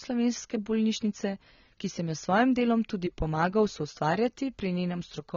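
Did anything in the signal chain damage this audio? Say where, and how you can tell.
Yes, at the codec stage, and throughout the speech: nothing comes through above about 6.9 kHz, and the band below carries the smeared, watery texture of a heavily compressed encode. This is likely low-bitrate audio saved at a high bitrate, a coarse first encode re-wrapped as a generous MP3. A simple low-pass filter would leave the lower band clean. A genuinely low-bitrate file would not sit in a large container. Here the early damage survives untouched, and the later encode adds nothing audible.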